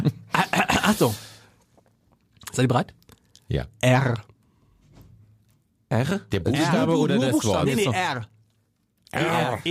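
From 0.11 s right through to 9.70 s there are clock slip clicks, hundreds of tiny single-sample jumps roughly every 30 ms that blur into a soft, steady rattle. Two free-running clocks likely drift apart by several hundred ppm, forcing a sample dropped or repeated each time.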